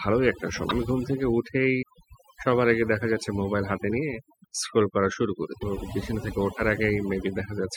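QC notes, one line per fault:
Throughout: overdone noise removal. The noise reduction is set so hard that frequency bands near its noise estimate are pulled down or removed outright. The background falls to near silence dotted with twinkling specks, and the quieter parts of the speech go too. Ordinary low-bitrate coding gives a similar swirl, but here the damage follows the noise floor.
0.69–0.71 s, 1.81 s, 4.43 s, 5.61–5.63 s: broken MP3 bit reservoir. At each point the audio skips forward and a brief chirp, noise burst or small hole appears, lasting 16 to 28 ms, around one 24 ms MP3 frame. The likely cause is frames cut out of the stream, so the next frame reads its borrowed reservoir bytes from the wrong data. A plain dropout would leave a clean gap instead of this garbled output and jump in timing.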